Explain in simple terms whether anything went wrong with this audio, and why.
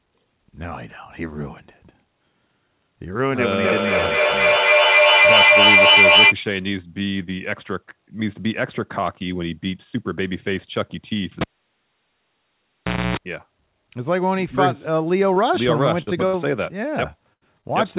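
Feedback echo between two devices, from 3.63 to 6.37 seconds. Two devices in the same room were on one call, and each microphone picked up what the other was playing. Each echo canceller only removes its own device's output, so the sound kept looping back. The speech returns roughly every third of a second, thinner and more ringing each time. At their loudest the repeats are stronger than the speech itself, so they pile up instead of fading.

Cable pulled and plugged in, from 11.41 to 13.17 seconds. A live cable was pulled out and pushed back in. You hear a pop, then about 1.7 seconds of near silence. Next comes a short burst of mains buzz at 60 Hz, lasting about 0.28 seconds, while only the plug's tip was touching. A second pop follows as the sound comes back.

Short concealed packet loss, from 15.34 to 15.38 and from 17.61 to 17.65 seconds. Each time about 20 milliseconds of the call arrived too late to play. 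The receiver patched the hole by stretching the sound just before it, then blended back into the real audio. The result is a tiny smear or wobble rather than a gap.

Burst of packet loss, from 16.02 to 16.09, from 16.27 to 16.35, and from 17.33 to 17.43 seconds. These are longer dropouts, with about 40, 60 and 80 milliseconds of audio missing. The receiver held the last sound and let it fade, so you hear a brief buzz or hiss. The speech then resumes slightly further on, with the lost piece simply gone.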